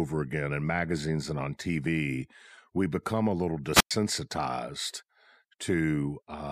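A speech clip with one wireless microphone squelch dropout from 3.72 to 3.91 s: the FM radio signal fades, hiss swells briefly, then the receiver's squelch mutes the output for about 106 ms. On a spectrogram, broadband noise precedes a blank gap; the waveform flatlines.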